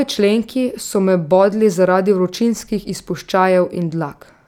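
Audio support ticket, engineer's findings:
Listened to the whole speech recording and found nothing wrong to flag, so there's no fault to chase on this ticket.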